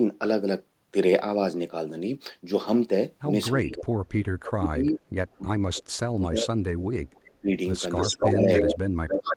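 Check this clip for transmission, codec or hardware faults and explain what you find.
The speech suffers from two related faults from a loudspeaker-side echo canceller: speech suppressed in double talk, and echo leak.

Speech suppressed in double talk, from 3.59 to 5.01 s, 5.42 to 7.5 s, and 8.25 s to the end: the voice dips and breaks up, by up to about 35 dB in the first two stretches (roughly 1 s and 1.5 s affected) and about 25 dB in the last. The likely cause is an echo canceller that could not separate the talker from the loudspeaker echo while both sides spoke, so it turned everything down.

Echo leak at 5.32 to 5.38 s, 7.25 to 7.33 s, 7.96 to 8.74 s, and 9.08 to 9.34 s: a delayed copy of the voice comes back. It trails by 312 ms in the first burst and 282 ms in the rest. The first is faint at about 40 dB below the speech, and the second is about 30 dB below. The third is about as loud as the speech, and the last is only about 5 dB below it. 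The likely cause is an echo canceller that failed to remove all of the loudspeaker sound its microphone picked up, so the leftover was sent back.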